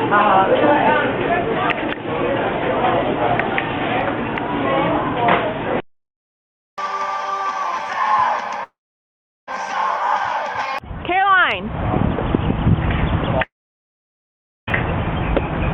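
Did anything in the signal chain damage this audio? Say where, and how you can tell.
Yes. At 8.63–9.49 s and 13.44–14.69 s the sound smears into a fading buzz, then goes silent for about 0.74 s and 1.17 s before resuming with material skipped. A spectrogram shows a decaying tail into a blank band, likely a long network dropout.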